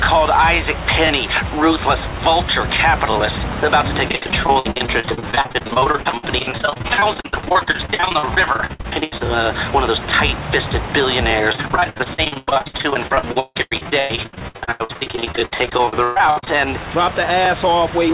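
From 4.08 to 9.22 s and again from 11.52 to 16.51 s, repeated packet loss (robotic sound) chops the audio into dozens of short holes, each patched by stretching the previous sound, with nearly half of each stretch concealed and gaps up to 77 ms and 158 ms. Unlike a single dropout, the constant patching gives a choppy sound with pieces missing across the whole span. Beneath it, the band stops at 4 kHz, consistent with a telephone-grade codec.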